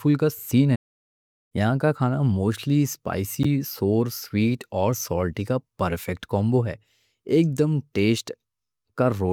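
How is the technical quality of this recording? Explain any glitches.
The recording has two glitches, one a silent gap and one a brief frame glitch.

From 0.75 to 1.52 s, right after "کا سین", the speech cuts to silence for about 0.75 s, then resumes with "یہاں کا کھانا". This is a playback stall, likely the player starving for data or its thread being blocked.

At 3.43 to 3.46 s, just before "سور سویٹ اور", a short glitch appears. This is a corrupt frame decoded: flipped bits in one compressed frame were played anyway, throwing energy to wrong frequencies for that frame's length. It puts sound at the wrong frequencies, which separates it from a plain gap.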